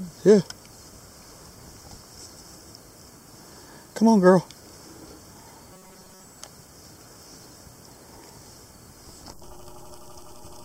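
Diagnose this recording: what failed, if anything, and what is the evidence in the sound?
From 5.73 to 6.24 s, robotic sound from repeated short buffers: a rigid 188 Hz buzz, likely a starved driver buffer looping 5.3 ms chunks, not pitch-following distortion.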